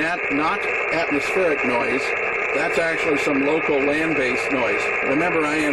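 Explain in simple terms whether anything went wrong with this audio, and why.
Nothing went wrong here as far as a careful listen can tell, so there's nothing to point to or explain.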